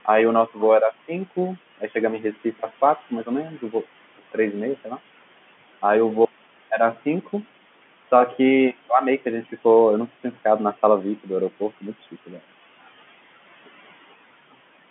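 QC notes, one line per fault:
Throughout, noise suppressor artifacts: the room noise is pushed down by about 15 dB in the gaps and comes back under the talking. The gain is set band by band, frame by frame.
0.97–1.38 s, 1.78–2.64 s, 2.96–3.84 s, 6.71–7.28 s and 11.6–12.38 s, speech cut by the noise suppressor: quiet parts of the speech were judged to be noise and turned down with it, by about 9 to 18 dB. Roughly a tenth to a fifth of a second in each stretch sounds swallowed or faint.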